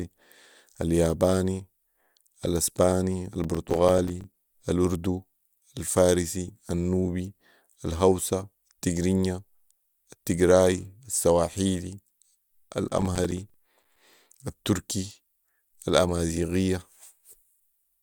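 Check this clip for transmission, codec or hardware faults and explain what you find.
The clip has two bursts of processor overload crackle, at 3.44–4.33 s, just before "الاردو الفارسي النوبي الهوسا", and at 12.90–13.96 s. The processor missed run after run of short buffers, around 5 ms each, leaving silent gaps with hard edges. Together they sound like gritty tearing over the speech. A single dropout would be one clean hole and clipping would follow loudness, but this is a dense chain of tiny gaps that stops when the load passes.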